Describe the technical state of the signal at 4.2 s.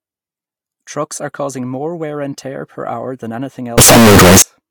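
At 4.2 s the signal is badly broken. From 3.78 to 4.42 s the speech turns into loud, harsh distortion, and quiet moments blast as hard as the rest. The likely cause is signed and unsigned mixed up, which fits 16-bit samples. Reading the samples with the wrong sign convention flips the top bit. Every zero crossing then jumps across the full range. Small waveforms near silence become huge swings.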